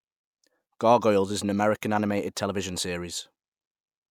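No technical faults are audible.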